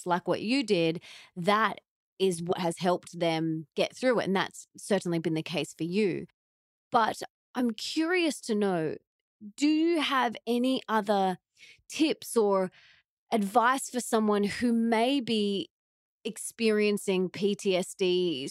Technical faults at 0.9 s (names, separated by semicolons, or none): none